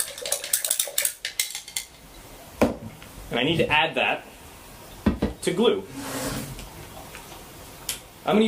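At 0.69 s a block of digital silence about 10.7 ms long replaces the sound with silence. That length fits a 512-sample buffer left unfilled in time. Unlike a faded dropout, it switches off and back with no ramp, so it comes across as a sharp tick.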